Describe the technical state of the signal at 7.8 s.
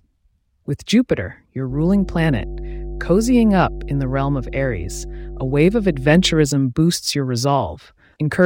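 At 7.8 s the speech signal is intact, with no fault present at that moment.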